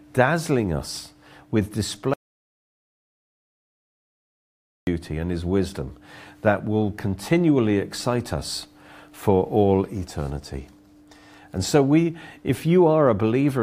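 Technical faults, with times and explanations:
2.14–4.87 s, audio dropout to silence. Just after "dazzling us with", the speech cuts off abruptly. The next 2.73 s is silence, with no room tone or breath underneath. Speech returns mid-flow at "and his wisdom that". Whatever was said in that gap is lost. The input was likely interrupted by a disconnect, a failed link or an accidental mute, while the recorder kept writing silence. That is why the gap is dead rather than quiet.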